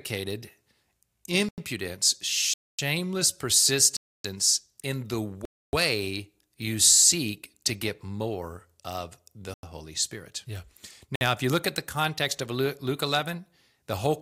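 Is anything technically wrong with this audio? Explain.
Yes. This speech has six blocks of digital silence: 1.49 s (93 ms), 2.54 s (251 ms), 3.97 s (279 ms), 5.45 s after "in the" (279 ms), 9.54 s after "get more of the" (93 ms), and 11.16 s before "if you look at" (56 ms). The playback program likely did not fill its output buffer in time, so samples became zeros. The 93 ms gaps fit a 4096-sample buffer. Each gap starts and ends abruptly and leaves a short hole.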